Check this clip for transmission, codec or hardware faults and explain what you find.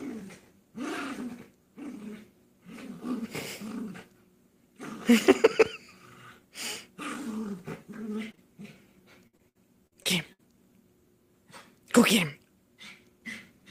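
Two packet-loss faults are present, both from data arriving too late or not at all.

Short concealed packet loss occurs twice back to back, from 8.31 to 8.35 s and from 8.35 to 8.39 s. Each time about 20 ms of audio failed to reach the decoder, and the receiver bridged the hole by extending the preceding sound (pitch-based if voiced, shaped noise if not) before cross-fading into the real signal. Together they produce a brief smear or wobble of under a tenth of a second, and any short transient in that span can disappear.

Repeated packet loss (robotic sound) runs from 9.27 to 10.41 s. Transmission broke down again and again: seven separate holes totalling about 280 ms, the longest 59 ms, so roughly a quarter of that stretch is synthesized rather than received. Each gap is patched by continuing the last sound, and the next one follows before the audio has properly recovered. The stretch sounds choppy, with pieces of the original missing.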